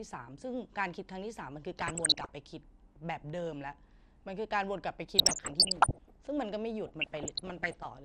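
Speech runs throughout with a dull, band-limited sound and a granular, gurgling edge on every syllable. The upper range switches in and out while what remains sounds coarse, which is most likely MP2 compression at a low rate, fitting something around 80 kbps. What marks it as MPEG Layer II rather than a modern codec's smearing is the way fixed slices of the spectrum drop out wholesale, giving a steady, grainy dullness rather than swirly or metallic artefacts.

On top of that, DAB burbling breaks out in three bursts: 1.81 to 2.31 s, 5.17 to 6.16 s and 6.86 to 7.85 s. Here bit errors from poor reception have slipped past error correction into the audio data, so individual sub-bands leap in level for single frames, producing bubbling, squelching chirps. Unlike the constant compression dullness, these are sudden and episodic. The second burst sounds the most heavily damaged, and the last is somewhat milder.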